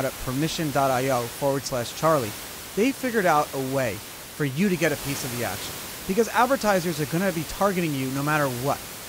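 Speech recording with no technical faults to report.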